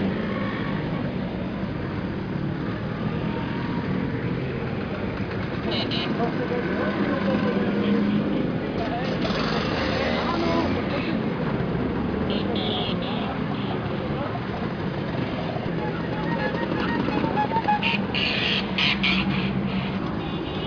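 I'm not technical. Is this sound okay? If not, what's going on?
Yes, nothing stood out as a problem when listening to this recording.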